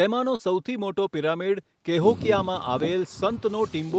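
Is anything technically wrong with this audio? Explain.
Yes. Short concealed packet loss occurs from 0.35 to 0.42 s: about 40 ms of the speech arrived too late for the decoder, so the receiver extended the preceding sound to cover the gap before blending back, leaving a brief smear or wobble.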